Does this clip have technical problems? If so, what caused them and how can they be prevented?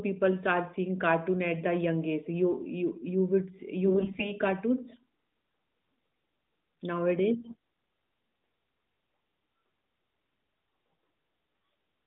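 Yes. There are AMR bit errors from about 3.87 to 4.33 s and again from 7.41 to 7.55 s, where the speech keeps its pitch and level but goes hoarse, scratchy and gargly. The narrowband mobile band, roughly 150 Hz to 3.7 kHz, sounds as expected. A weak radio link flipped several percent of the less protected bits in each frame. The frame checks still passed, so the decoder used misplaced pulses and wrong finer pitch, gain and spectrum values. To prevent it, improve signal strength or use a more robust mode with stronger error protection.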